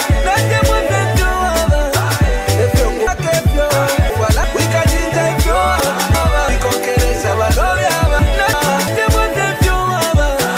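Chunks out of order at 3.07–4.44 s, 5.80–6.49 s and 8.19–8.88 s: 0.34 s blocks play three, then one, then one block late. The sound jumbles, but unlike a dropout nothing is missing.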